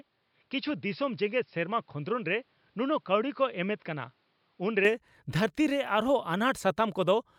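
A speech recording in which the first 4.85 s sounds dull and boxy, with nothing above 5.4 kHz, about 5 dB quieter and with faint background noise well below the signal. At 4.85 s the full band returns abruptly with no gap, which points to an input switched to a poorer device as the likely cause. A simple filter change would not also shift the level and noise floor together like this.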